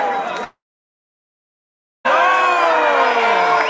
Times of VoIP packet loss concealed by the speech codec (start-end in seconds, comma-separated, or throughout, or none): none